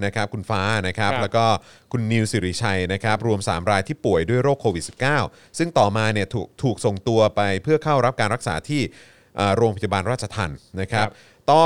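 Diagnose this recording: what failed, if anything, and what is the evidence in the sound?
Nothing failed in this speech recording; the sound gives no evidence of a fault at any stage.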